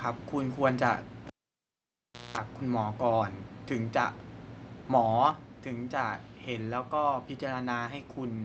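At 1.27 s you get the classic cable pulled and plugged in. There's a pop as the lead comes out, then roughly a second of near silence while nothing's connected. On the way back in, the tip touches before the plug seats, so there's a burst of 60 Hz mains buzz lasting about 200 ms, and then another pop at 2.37 s as the speech comes back.

Then at 5.31 s the speech and the background both drop by about 4 dB in one sudden step, with no fade. That's most likely the microphone volume stepped down, with the call software deciding the input was running too hot and cutting the device's input gain in a single jump rather than easing it down, so everything after that point just sits quieter.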